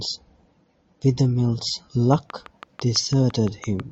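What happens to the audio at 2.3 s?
At 2.3 s the speech is inside a train of clicks running from 2.14 s to the end at 3.91 s: about ten similar pops, evenly spaced at 6 per second and peaking roughly 5 dB above the speech, likely from interference or a faulty connection. Their steady rhythm and matching shape set them apart from random crackle.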